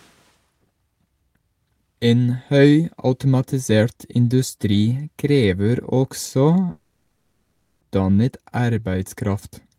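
A speech clip with one problem: from 6.71 to 7.83 s there's a long network dropout, likely. For about 1.1 s the original audio is simply gone, and the gap gets papered over with a fading buzz of the last sound instead of silence, before speech resumes with that stretch missing.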